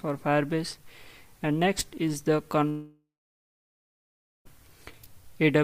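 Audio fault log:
2.69–4.47 s, long network dropout: the last sound trails into a fading buzz, then about 1.4 s of silence; likely lost packets, and the audio resumes with that stretch skipped rather than delayed.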